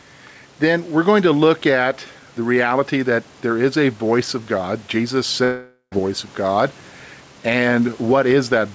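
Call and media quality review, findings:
Gain pumping, throughout. Level swing of around 5 dB, giving a squashed level. Likely cause: input gain set too high, with a fast limiter or compressor clamping each peak.

Long network dropout, 5.44 to 5.94 s, just before "voice of". About 0.48 s of audio is lost; the receiver continues the last sound as a fading buzz, then roughly 0.1 s of silence before playback resumes. Likely cause: packet loss exceeding jitter buffer concealment. The band stops at 8 kHz, which fits a wideband call codec such as G.722.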